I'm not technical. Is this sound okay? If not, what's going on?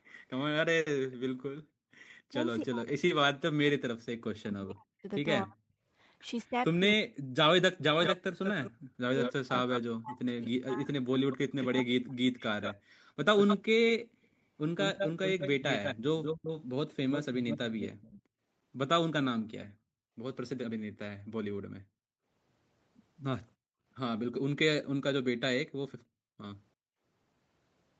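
No, there are three separate problems, all from the echo canceller, the part of a call system that stops a loudspeaker's sound from being sent back through the microphone.

Background gated by the echo canceller: the room sound behind the speech suddenly drops away and then comes back. This happens from 1.6 to 1.92 s, very briefly at 8.75 to 8.79 s, from 12.79 to 14.31 s, and for about a second in total between 19.68 and 26.39 s. Each time, the canceller turned the microphone down hard because it thought the loudspeaker was playing.

Speech suppressed in double talk: from 2.3 to 12.18 s the voice keeps dipping, getting duller or breaking up, for about five seconds in total, and at times it almost disappears. The likely cause is that the other side was talking at the same time and the canceller, unable to tell the two apart, turned both down.

Echo leak: from 8.04 to 18.22 s a second copy of the voice follows the original about 0.19 s later, nearly as loud as the voice itself. 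This is likely a loudspeaker on one end whose sound was not fully removed before being sent back.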